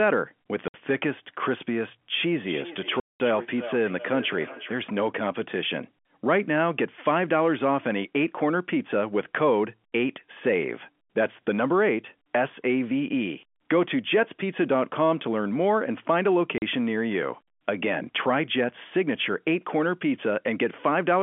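Packet loss filled with silence first appears at 0.68 to 0.74 s: a 60 ms hole with hard edges, consistent with three lost 20 ms packets that the receiver replaced with silence. The same fault returns at 3.0 to 3.2 s (200 ms, consistent with ten packets) and at 16.58 to 16.62 s (40 ms). Feedback echo between two devices runs from 2.31 to 4.79 s. A second device in the room plays the far end back into a microphone whose echo canceller cannot remove it, so the speech comes round again roughly every 0.4 s, at its loudest about 15 dB below the direct speech. Throughout, the audio carries G.711 A-law telephone coding, band-limited to the 200 Hz to 3.4 kHz line band.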